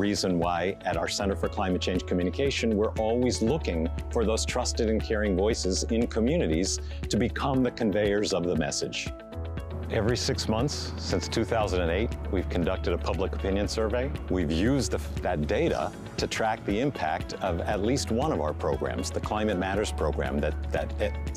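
Nothing in this recording comes across as a technical fault at any point, so there's nothing here that needs pointing out.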